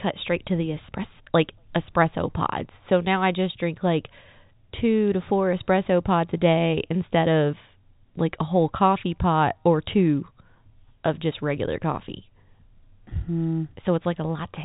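Nothing's wrong with this speech clip; it's ordinary G.711 telephone audio with the usual top end stopping around 3.8 kHz, and there are no faults to point to anywhere in it.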